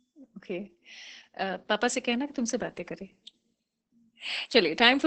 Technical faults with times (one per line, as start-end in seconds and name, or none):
0.00-5.07 Opus voice compression